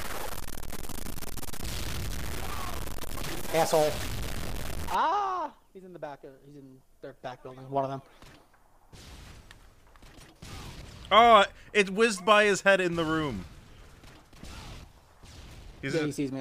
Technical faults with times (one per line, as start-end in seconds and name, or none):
0.00-4.95 stuck bit